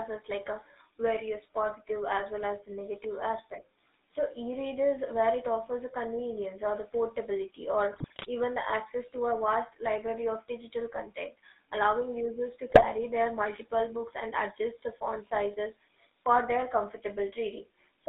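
GSM full-rate codec coloring throughout this speech clip: the vocal-tract model driven by sparse regular pulses gives a buzzy, gravelly roughness, and the band runs only from 250 Hz to 3.7 kHz, which fits the 13 kbps full-rate coder. GSM bit errors at 7.93–8.28 s, after "convenience or the portability" and before "even the access to", and at 12.70–12.85 s, after "content allowing users to" and before "their multiple books and": corrupted filter, pitch and gain values break the decoded speech into squawks, pops and gargling.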